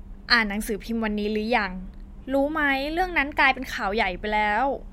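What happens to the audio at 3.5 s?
A drift correction step spans 2.99 to 3.70 s, so 3.5 s falls inside it. The speech runs about 6.5% fast and 109 cents sharp, just over a semitone, then snaps back. The likely cause is clock-matching software speeding playback to drain its buffer.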